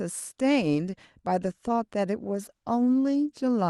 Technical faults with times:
2.20-3.70 call bitrate drop

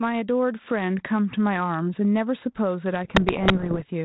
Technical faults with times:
0.00-4.05 gain pumping
3.05-3.82 bit errors on an ADPCM link

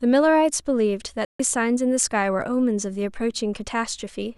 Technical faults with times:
1.25-1.40 digital broadcast dropout

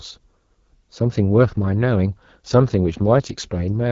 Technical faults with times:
0.00-3.91 AMR wideband (HD Voice) codec

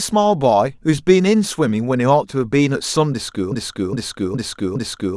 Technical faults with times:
3.52-5.17 broken-record loop

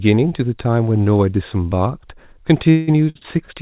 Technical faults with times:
2.70-3.50 repeated stalls (stutter)

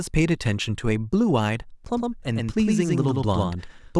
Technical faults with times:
1.85-3.99 doubled audio track

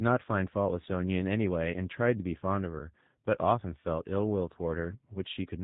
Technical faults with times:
0.00-5.63 G.729 codec
5.14-5.18 VoIP packet loss concealed by the speech codec

